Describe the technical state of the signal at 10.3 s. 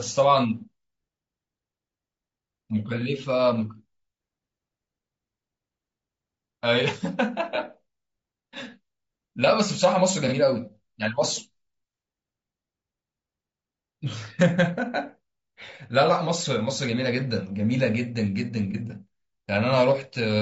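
At 10.28 to 10.33 s the speech turns briefly smeared and noisy, a short blurred patch where the detail collapses before normal sound resumes. This is AAC frame loss with concealment: the decoder lost data and filled the gap by reusing the last good spectrum with scrambled phase or interpolated energy. Because the gap is so short, about 30 ms of it concealed, which fits a single lost frame, it never fades to silence.

Underneath this dropout the speech has a rough, grainy texture, with noise filling the spaces between pitch harmonics and a top band that sounds thin and synthetic. The likely cause is low-delay AAC compression, the AAC-ELD variety used for video calls. Its short frames resolve harmonics poorly and spend bits inefficiently, so at a rate the plainly audible damage points to, around 32 kbps, the spectral detail degrades into this grainy quality.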